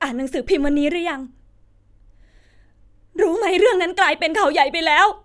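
No audible faults are present anywhere in the recording.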